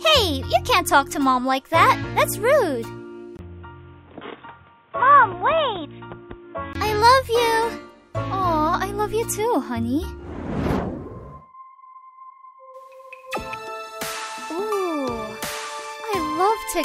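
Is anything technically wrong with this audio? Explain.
Yes. From 3.37 s to 6.75 s the sound turns dull and boxy, with nothing above 3.8 kHz, and then clears again. This is likely an input switched to a poorer device: the recording path moved to a narrower-band microphone, with its own coloration and a new background noise about 35 dB below the signal, then switched back. A brief 20 ms silence at the changeover and the changed noise floor, with the level essentially unchanged, set this apart from a simple filter or bandwidth drop on the same input.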